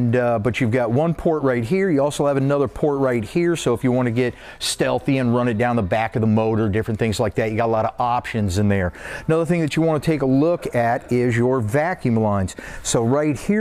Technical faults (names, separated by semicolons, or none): none